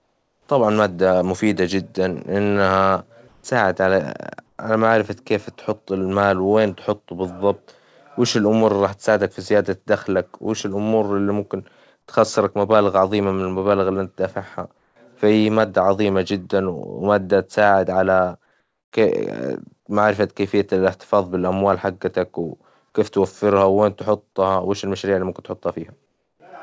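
In the pauses at 0.00–0.48 s (before "طبعًا مادة مفيدة"), 3.28–3.44 s, 4.46–4.58 s, 14.78–14.96 s (between "المبالغ اللي إنت دافعها" and "فهي مادة عظيمة جدًا") and 26.06–26.40 s, the background turns flat and featureless and drops by about 1 to 6 dB. This is comfort noise in place of the background, likely from discontinuous transmission on the G.722 call path, which carries nothing above 8 kHz.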